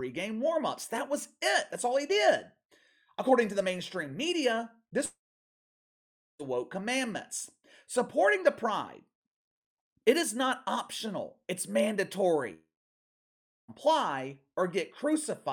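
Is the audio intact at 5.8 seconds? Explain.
No. From 5.05 to 6.41 s, just after "to the mainstream media", the speech gives way to a brief fading buzz or hiss and then about 1.2 s of silence, resuming at "woke commandments". This is a long network dropout, likely caused by roughly 1.3 s of audio never arriving and being concealed.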